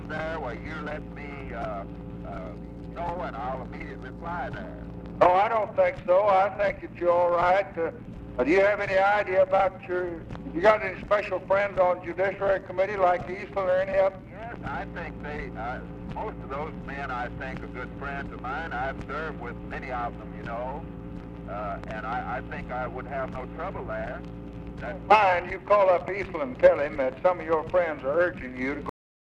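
At 28.89 s the audio has a cut-off end: the final buffers were never written, so the sound halts mid-event and drops straight to digital silence for the last 0.47 s. Unlike a fade-out or natural ending, there is no decay or tail.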